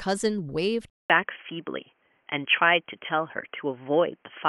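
At 0.90 s the speech drops out for 200 ms, and when it resumes the character of the recording has changed for the rest of the clip. Nothing above 3.2 kHz remains, so the sound turns dull and boxy, the level shifts by around 5 dB, and a new background noise floor sits roughly 45 dB below the signal. This points to an input switched to a poorer device, likely a fallback microphone or a headset's narrowband call profile.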